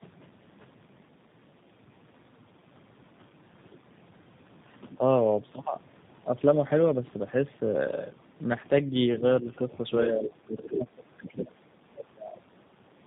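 Throughout, tandem speech coding: the audio passes through what sounds like three speech coders in a row, ending in one like G.729A, each re-coding the last one's output. The speech is rough, muffled and warbly, with nothing above 3.8 kHz. From 11.27 to 11.42 s, the other side's voice leaks through, most likely because an echo canceller missed loudspeaker sound. It is a brief scrap roughly 10 dB below the speech.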